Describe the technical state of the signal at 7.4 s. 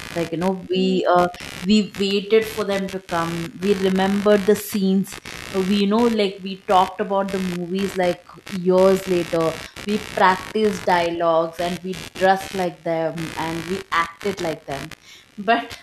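At 7.4 s there's computer activity noise running under the speech, as it does across the whole clip. Processor or mouse load is disturbing the shared ground, giving a buzzy chirping pulse at roughly 70 a second, sitting around 15 dB below the speech.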